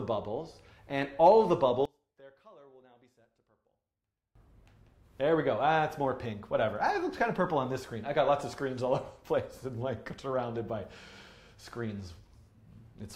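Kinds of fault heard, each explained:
One channel inverted: from 1.85 to 4.35 s the sound falls by about 29 dB to a faint residue, likely because one stereo channel's polarity is reversed so shared content cancels in mono. The waveform shrinks to a sliver, and the spectrogram goes nearly blank.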